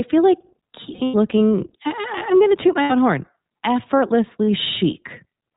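The whole clip passes through the iLBC codec, and its damage is plainly audible. Nothing above 4 kHz survives, so the speech sounds narrow. It is also slightly rough and synthetic. This texture fits 20 ms frames at roughly 15 kbps.

Lost iLBC frames leave three gaps. From 0.94 to 1.16 s, after "feel like", 160 ms drops out in bursts, the longest about a tenth of a second. At 2.82 to 2.92 s, after "I'm going to toot", 80 ms goes. At 4.44 to 4.48 s, 40 ms goes. Each gap is filled with a repeated pitch cycle mixed with noise. It sounds like a held, buzzy vowel. The voice recovers at once.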